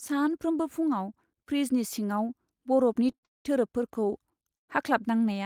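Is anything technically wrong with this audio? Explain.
Yes, there are two delivery faults.

From 3.09 to 3.47 s there are repeated stalls (stutter). Packets arrived too slowly four times, draining the jitter buffer, and the receiver stretched the last sound to fill about 295 ms, with the longest gap 197 ms. Nothing is lost, but the speech drags and stutters.

From 4.56 to 4.70 s there is a call audio freeze. Packets were likely held up in transit, emptying the buffer. The sound stops for about 118 ms, nearly all of it silence, then resumes where it left off, adding a gap and a 118 ms delay.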